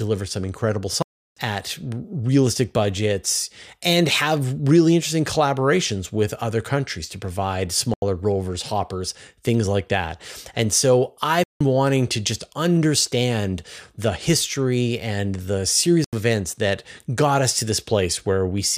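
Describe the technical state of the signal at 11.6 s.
A short hole: the sound drops abruptly to dead silence from 11.44 s to 11.61 s, about 170 ms, then snaps back with no fade. This is a block of digital silence, where a block of samples, which fits an 8192-sample buffer, was left as zeros, as when the output buffer is not filled in time.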